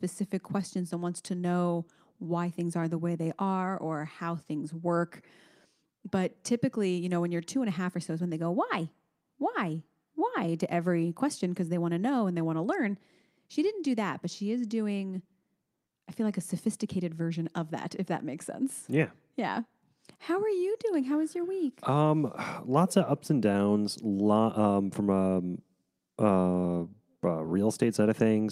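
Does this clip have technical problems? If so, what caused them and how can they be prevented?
No, no technical problems can be heard here.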